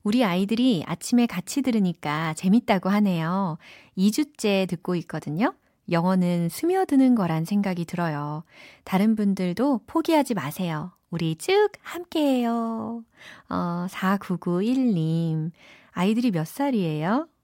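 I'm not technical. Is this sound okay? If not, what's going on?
Yes, nothing in this recording points to a technical problem with how the sound was captured or delivered.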